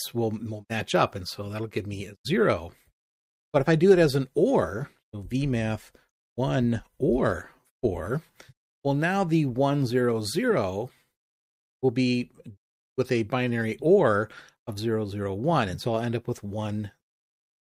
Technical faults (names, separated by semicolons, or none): none